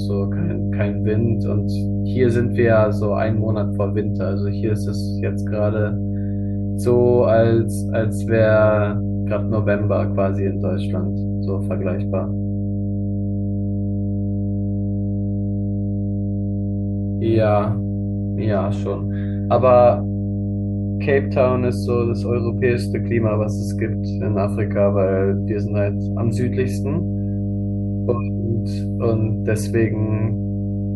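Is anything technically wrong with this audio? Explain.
Yes. Mains hum runs throughout the speech: a ground loop or nearby transformer is leaking the 50 Hz power line into the signal, producing a steady low drone with some low harmonics that sits roughly as loud as the speech itself.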